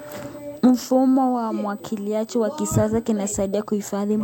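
Running under the speech for the whole clip there's a USB whine: a steady, fixed-pitch tone at 8 kHz, loudest at its 16 kHz harmonic and sitting roughly 30 dB below the speech. That's the bus's 125-microsecond microframe current draw leaking in through power or ground.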